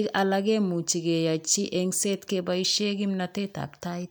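No technical faults are audible.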